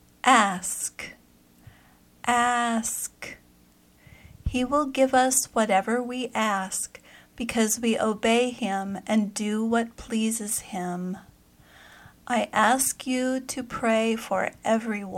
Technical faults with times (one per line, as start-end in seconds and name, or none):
none